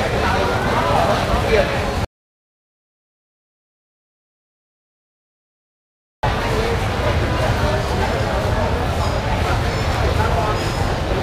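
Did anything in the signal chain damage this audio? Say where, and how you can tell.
Yes. An audio dropout to silence spans 2.05 to 6.23 s: silence, no room tone. The input link likely failed while recording continued.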